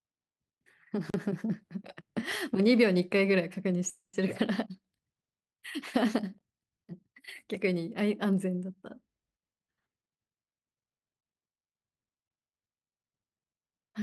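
A block of digital silence at 1.10 to 1.14 s drops the sound to zero for 40 ms with no fade, most likely because the output buffer wasn't filled in time. It's heard as a short hole.

A call audio freeze runs from 3.89 to 4.22 s. The likely cause is delayed packets emptying the jitter buffer. The receiver stretches the last sound into a fading buzz for about 240 ms, including roughly 110 ms of silence, then resumes where it left off with nothing lost.

A second block of digital silence at 6.39 to 6.41 s is shorter, at 20 ms. It still sounds like a short hole, with the same hard cut to zero and back.

A jitter buffer speed-up from 8.96 to 10.67 s plays the sound about 14% fast at unchanged pitch. The receiver, holding surplus audio, trims many tiny pitch-period slices, about a fifth of a second in all, so the passage sounds hurried.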